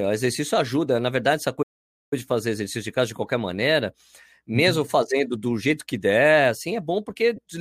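A speech recording in which the sound cuts out abruptly at 1.62 s and stays silent for about half a second (roughly 490 ms) until 2.13 s. That gap is likely a playback stall, where the player ran short of data or its thread was held up, leaving the output empty until it recovered. Near the end, from 7.36 to 7.39 s, the sound briefly turns into a hissy, smeared blur for about 22.5 ms. This comes from lost LE Audio frames, with the LC3 decoder covering the gap by repeating the last spectrum with randomised signs. The length fits three missing 7.5 ms frames.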